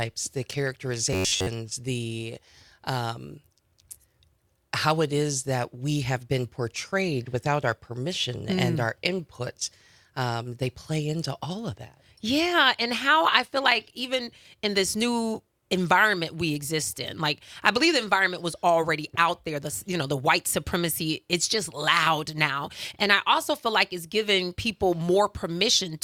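From 1.13 to 1.47 s, robotic sound from repeated short buffers. Most of the sound is a rigid, metallic buzz at 93.8 Hz, likely from one 10.7 ms chunk looping.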